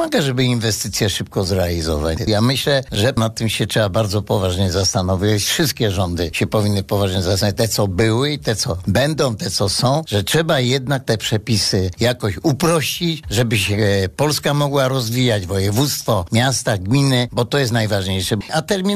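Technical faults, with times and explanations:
2.95 s, gap between stream segments: an 8 ms hole of pure silence with hard edges cuts into the sound where two segments' time stamps fail to meet and the player pads the space. Nothing is lost; the clip is just 8 ms longer. The waveform drops abruptly to near-flat silence, and the spectrogram shows a thin blank vertical stripe.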